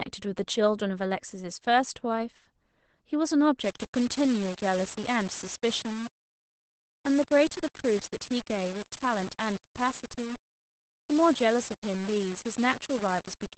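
From the first moment the speech carries Opus voice compression: the SILK coder at a rate that points to roughly 12 kbps in wideband mode, with nothing above about 8.6 kHz. The voice sounds muffled and hoarse, and its slightly robotic edge distinguishes it from a simple low-pass filter.

From 3.64 s to the end, a harsher grain sits on top. Its likely cause is low bit depth without dither, which fits about 5 bits, rounded. The error tracks the signal, only about 15 dB down, so quiet stretches turn gritty and sputter instead of carrying steady hiss as dithered noise would.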